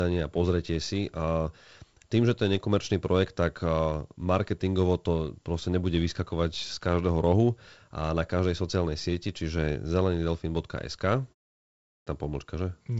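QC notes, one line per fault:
11.90 to 12.07 s, clipped start after a pause. Speech resumes after a 0.64 s silence, but its first 166 ms are missing. It begins abruptly. The output device went idle in the pause and needed that time to wake, so the onset was swallowed.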